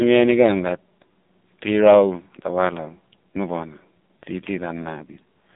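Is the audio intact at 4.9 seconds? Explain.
No, the AMR narrowband mobile codec runs throughout: nothing above 3.7 kHz, and heavy buzzy, synthetic pulse-coding, fitting roughly 6 kbps, separates it from a plain telephone filter.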